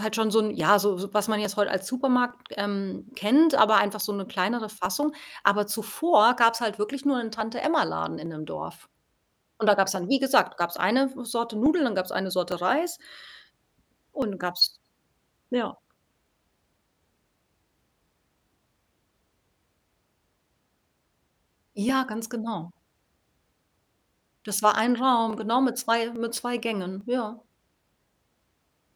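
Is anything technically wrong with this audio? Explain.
Yes. Clock drift buffer slips click every 0.85 s from 0.60 to 28.71 s, likely two clocks about 1000 ppm apart slipping about 30 samples; spectrogram shows vertical lines, waveform shows small jumps.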